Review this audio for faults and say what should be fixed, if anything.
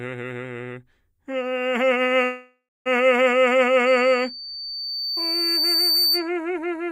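From 2.25 s to 2.88 s the music stalls. A fading buzz-like continuation of the last sound fills about 0.6 s, and the final 240 ms or so drop to silence. The music then resumes where it stopped, so nothing is lost, but everything after runs about 0.6 s late. This is likely a call audio freeze: delayed packets emptied the jitter buffer and the receiver concealed the gap. A larger adaptive jitter buffer or a steadier network path would prevent it.

From 3.86 s to 6.29 s a loudspeaker feedback squeal rises. It is a single tone at 4.6 kHz that swells over roughly two seconds. It peaks about 5 dB above the music. A microphone is picking up the loudspeaker it feeds, and at 4.6 kHz the loop gain exceeds one, so that frequency grows on its own. Lowering the gain, moving the microphone away from the speaker, or notching 4.6 kHz would prevent it.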